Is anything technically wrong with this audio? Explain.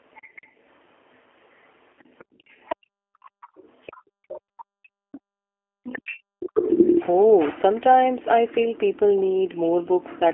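Yes. Throughout, the speech sounds narrow, slightly rough and synthetic, with nothing above about 3.4 kHz and thin low end below roughly 250 Hz. That is the G.729 codec: it rebuilds each 10 ms frame from a vocal tract model and a few pulses, which fits an 8 kbit/s line.

From 3.99 s to 5.83 s the room sound dips hard, by about 31 dB at its deepest, for roughly a second and a half in total. This is background gated by the echo canceller, which pulled the microphone down while the far end was playing.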